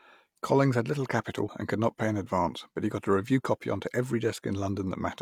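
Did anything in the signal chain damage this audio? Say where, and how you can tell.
Yes. At 1.49 s the speech skips forward: a sliver of roughly 20 ms is gone, and the audio either side is butted together with no gap. This is audio missing between chunks, most likely at the recorder's buffer stage, where material is handled in 2.0 s blocks and a piece is dropped at the changeover. On the waveform the trace jumps abruptly at 1.49 s; a spectrogram shows a thin vertical seam where harmonics break discontinuously.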